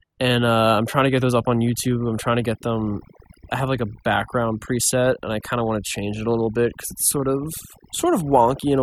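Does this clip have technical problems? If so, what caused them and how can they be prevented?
Yes. Overdone noise removal runs throughout. A noise reduction stage set too aggressively pulls individual frequency bands down whenever they sit near its noise estimate, taking quiet speech detail with them. Pauses drop to near silence with twinkling specks. Prevent it by using gentler reduction settings and checking the result by ear.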